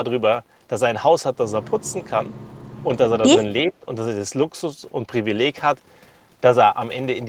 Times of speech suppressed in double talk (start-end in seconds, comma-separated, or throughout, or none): 3.66-3.86